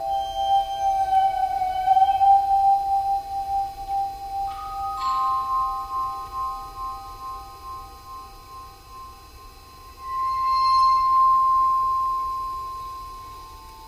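From start to finish the audio carries channel delay comb filtering: one channel trails the other by roughly 3 ms, and the mono sum cancels at regularly spaced frequencies, starting near 200 Hz. The result is a fixed hollow, phasey coloration that never shifts.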